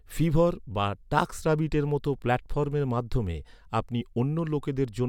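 No technical faults can be heard anywhere in the speech recording, with the signal holding steady and intact throughout.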